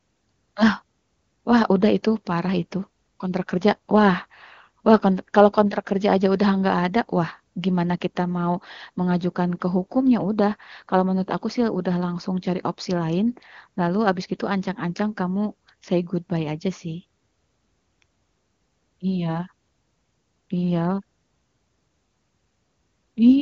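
No technical faults are audible.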